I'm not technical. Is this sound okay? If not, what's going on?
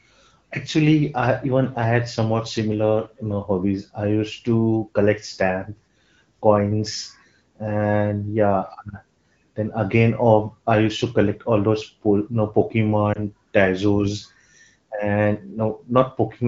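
No. At about 13.13 to 13.20 seconds there's a brief dip or warble in the speech. These are lost AMR speech frames, likely a single lost frame: a radio error corrupted a tiny slice of the call, and the HD Voice decoder briefly patched the gap by reusing the previous sound at falling volume.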